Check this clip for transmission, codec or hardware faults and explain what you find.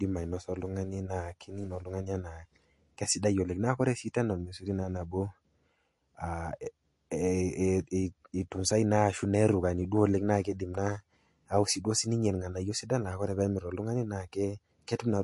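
There is one fault, present from start to finish. Throughout the speech, nothing sounds above 11.2 kHz, and s sounds swirl with a watery, metallic chirping. This is likely MP3 compression, at a bitrate that fits about 48 kbps. Short of bits, the encoder cuts the treble at a fixed point and drops weak frequency lines, which flicker on and off from frame to frame.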